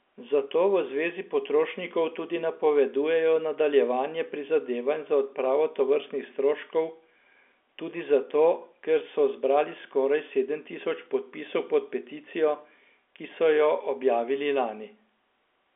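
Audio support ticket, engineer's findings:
Nothing to report. The speech sits in the narrow band you'd expect from G.711 telephone coding, topping out near 3.7 kHz, which is just how that line is supposed to behave.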